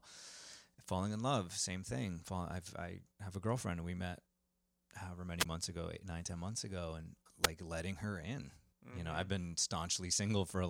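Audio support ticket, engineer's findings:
Wireless microphone squelch dropout, 5.39–5.46 s and 7.43–7.48 s. Static burst, then a 13 ms mute at the first. The second is almost only hiss. RF fade tripping receiver squelch.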